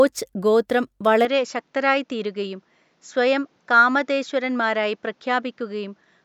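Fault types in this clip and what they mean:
Input switched to a poorer device: from 1.25 s the speech suddenly loses everything above 7.6 kHz, drops roughly 5 dB and picks up a new, faint noise floor, with no gap at the change, so the system likely swapped to a narrower-band microphone.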